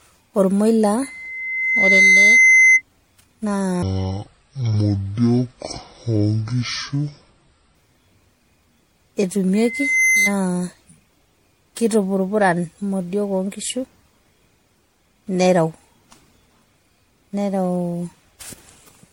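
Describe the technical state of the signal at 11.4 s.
At 11.4 s the speech carries generation loss, present across the whole recording rather than only at this point. The likely cause is repeated lossy re-encoding, consistent with about five passes through MP3 at a level that points to 64 kbit/s. Each pass requantises on a shifted frame grid, so noise and spectral holes accumulate. The result sounds swirly, smeared and hollow, and consonant attacks are blurred.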